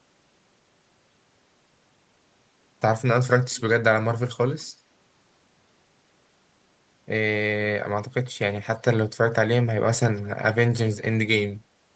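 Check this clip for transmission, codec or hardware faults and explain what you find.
Echo leak is present, appearing three times: 3.27 to 3.61 s, 4.58 to 4.81 s and 10.15 to 10.29 s. A copy of the speech returns about 0.2 s late, clearest in the first stretch and very faint in the later two, likely from a loudspeaker echo the far end's canceller did not fully remove.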